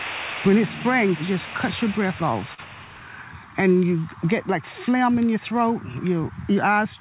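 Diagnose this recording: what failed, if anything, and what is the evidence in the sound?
Network stage: short concealed packet loss at 2.54 to 2.60 s. About 40 ms of audio never reached the decoder in time. The receiver filled the hole by extending the preceding sound, then blended back into real audio. That patch sounds continued rather than live.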